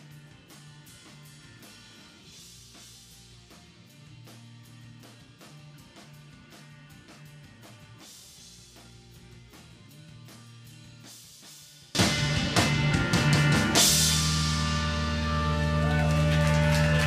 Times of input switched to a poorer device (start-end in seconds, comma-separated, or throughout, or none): none